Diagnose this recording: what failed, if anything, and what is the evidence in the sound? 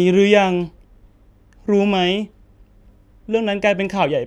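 Nothing in the speech stood out as a fault on listening, so there is no failed stage to point to.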